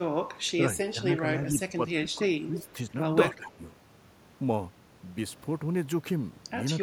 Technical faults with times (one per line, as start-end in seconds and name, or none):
0.86-2.78 speech suppressed in double talk
2.58-2.69 echo leak
3.31-3.67 speech suppressed in double talk